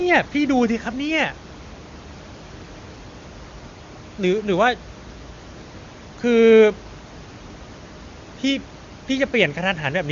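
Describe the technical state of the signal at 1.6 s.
At 1.6 s the signal is intact, with the room noise sitting about 21 dB below the speech and the AMR wideband (HD Voice) band limit near 7.3 kHz present as expected.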